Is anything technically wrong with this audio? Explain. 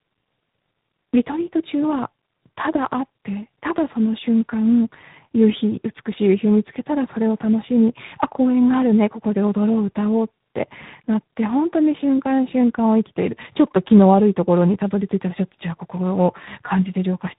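Yes, there's tandem speech coding throughout. It sounds like two low-rate speech coders in a row, likely G.729A feeding G.726 through a G.711 link. The second coder works on already-mangled audio, so the speech comes out rough, muffled and warbly, with nothing above 3.8 kHz.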